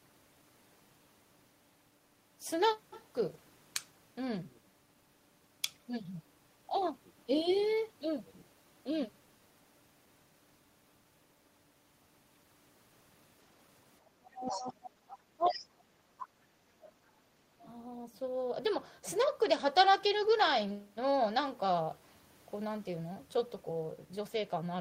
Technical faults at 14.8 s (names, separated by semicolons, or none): speech suppressed in double talk